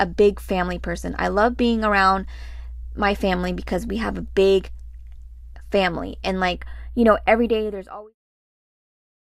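Speech, with channel delay (comb filtering) from 6.55 s to the end: one channel lags by a tiny amount, around 0.07 ms, so the mono sum cancels at fixed, evenly spaced frequencies starting near 7 kHz. That gives a static hollow, dulled top end, unlike a sweeping flanger or a smooth low-pass roll-off. The fade-out ending at 8.16 s overlaps this.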